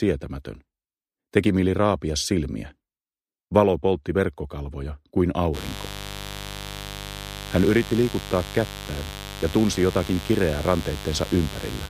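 From 5.52 s to the end there's mains buzz: switching spikes on 50 Hz mains leaking in, a raspy, harmonic-rich buzz sitting only roughly 10 dB below the sound.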